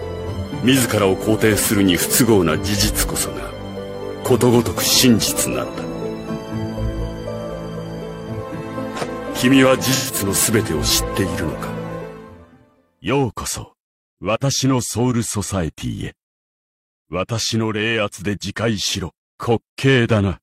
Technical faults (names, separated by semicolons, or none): AAC frame loss with concealment